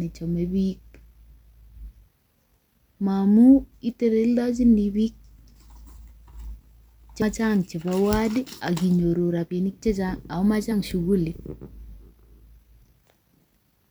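At 7.22 s, just before "chebo ward akinyoru rabinik", and at 10.71 s, compressed frames are skipped. The speech jumps ahead about 100 ms, then about 50 ms.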